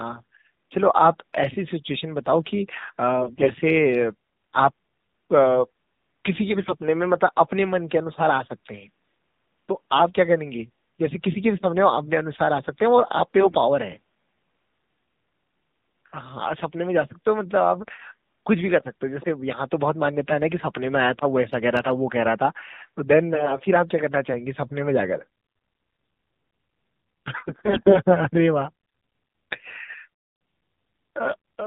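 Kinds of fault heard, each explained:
AMR narrowband mobile codec: This is the mobile speech codec of 2G and 3G networks. It rebuilds the voice from a vocal tract model fed by a few pulses per short subframe. Here it runs the whole clip. Nothing above 4 kHz survives, so the speech sounds narrow and muffled. The damage is plainly audible. There is a buzzy, synthetic edge, which fits a low mode of about 7.4 kbps.
AMR bit errors: On a weak radio link, the less protected bits in a frame can arrive flipped while the check on the key bits still passes. The pulses then land in wrong places, and the finer pitch, gain and spectrum values drift. Five bursts occur, at 3.2 to 3.5 s, 6.5 to 6.7 s, 13.4 to 13.6 s, 23.3 to 23.6 s and 27.5 to 28.0 s. In each, the speech keeps its rough pitch and level but turns hoarse, scratchy and gargly. The bursts near 3.2 s and 27.5 s carry the heaviest error rate, about 15%.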